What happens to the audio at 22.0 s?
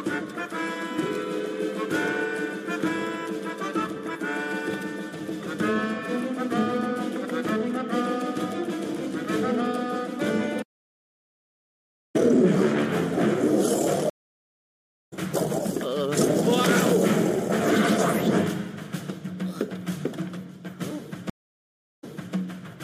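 At 22.0 s you're inside a stream reconnect that runs from about 21.30 to 22.35 s. The connection dropped, so the player goes quiet for about 0.73 s, reconnects, and spins up a fresh decoder mid-stream. When sound comes back it's picked up about 0.33 s earlier than where it cut off, because the server resent a chunk. You hear a short repeat, with the first frame or so muted or fading in.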